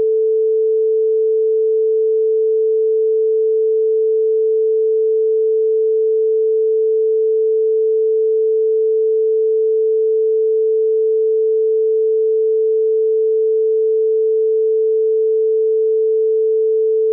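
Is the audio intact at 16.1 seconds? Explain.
Yes, the audio is intact at 16.1 seconds, with no dropout, click, distortion or other fault at that moment.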